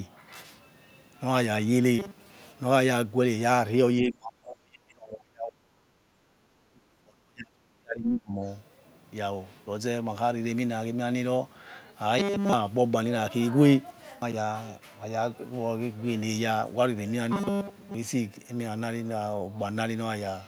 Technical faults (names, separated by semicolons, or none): robotic sound from repeated short buffers; speech suppressed in double talk; background gated by the echo canceller; other side's voice leaking through